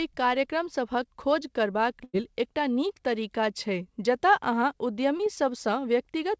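From 2.04 to 2.15 s the speech stalls into a held, fading sound, then picks up further along with a piece missing. This is a burst of packet loss: about 100 ms never arrived, and the receiver stretched the last sound across the hole, lowering it as the gap ran on.

At 5.17 to 5.21 s there is a brief smear in the speech, as though a fragment were glossed over. This is short concealed packet loss: roughly 20 ms failed to reach the decoder in time, so the receiver extended the preceding sound and blended back into the real audio. Both gaps sit within audio that has no content above 8 kHz, which fits a G.722 call codec.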